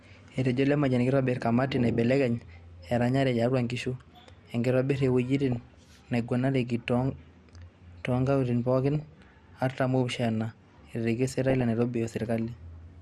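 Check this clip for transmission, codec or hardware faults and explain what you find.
Two faults are present: a constant codec degradation and four short bursts of reception damage on top of it.

MP2 compression runs through the whole speech clip. The top of the spectrum is missing and the remaining sound has a gurgling, grainy edge, which fits an MPEG Layer II encode at a low rate around 80 kbps. At that rate the coder cannot fund all 32 sub-bands, so it silences the upper ones and quantises the rest coarsely. That is the likely cause of the dull, granular character.

DAB burbling appears at 2.88–3.03 s, 5.52–5.79 s, 8.95–9.28 s and 11.50–11.61 s. The first falls between "keitobir kamati naibelekeny" and "tiatua inkishu". Bit errors at a small fraction of a percent slip past error correction into the MP2 data. Corrupted samples put short blips of noise into single sub-bands, and corrupted scale factors, where they get through, make sub-bands jump in level for up to a frame. 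The result is short noise blips and sub-band level jumps laid over the speech, each burst lasting about 0.1 to 0.3 s.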